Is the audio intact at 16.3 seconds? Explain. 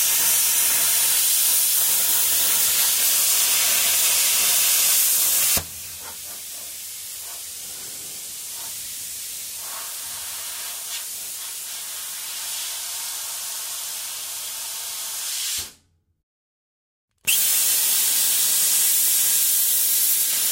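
Yes, the sound at 16.3 s is intact, with no dropout, glitch or other fault at that moment.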